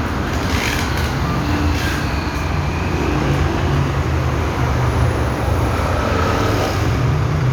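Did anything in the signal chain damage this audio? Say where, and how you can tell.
No, no signal chain damage.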